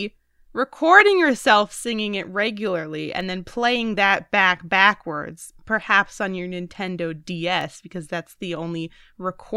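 From 0.27 s to 9.08 s, clock drift buffer slips give a regular click about every 0.73 s, roughly fifteen in all, through the speech. The likely cause is two clocks disagreeing by around 500 ppm, each slip dropping or repeating around 15 samples. These show as evenly spaced thin vertical broadband lines on a spectrogram and small step discontinuities in the waveform.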